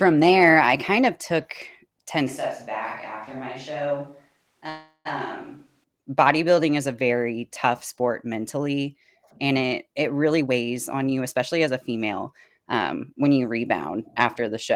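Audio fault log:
2.28–5.84 s, switch to a distant microphone: the speech suddenly goes roomy and hollow, loses bass, drops about 5 dB, and brings up room noise around 35 dB below the speech. That's likely the close mic dropping out and a far one taking over, until the close sound returns just before "bodybuilding is a very".
4.69–5.07 s, call audio freeze: the last sound is stretched into a fading buzz or hiss ending in about 30 ms of silence, 0.36 s in all, and the speech picks up where it stopped. Nothing's lost, but everything after lands 0.36 s later. That's likely delayed packets draining the jitter buffer.
10.32–12.13 s and 12.58–13.97 s, jitter buffer speed-up: right after "mentally and it it" the speech gets hurried at unchanged pitch, running at 113% and then 108%. The receiver is trimming tiny pitch-period slices to work off built-up delay, roughly 0.3 s and then 0.1 s.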